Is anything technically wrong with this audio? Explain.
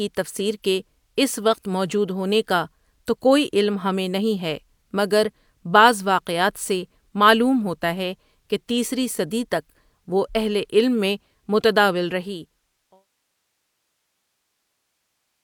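No, nothing here is technically wrong.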